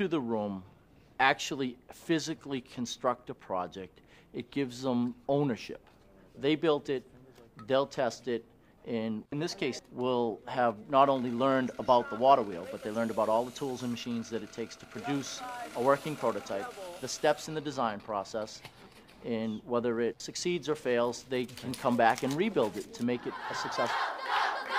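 No technical faults are audible.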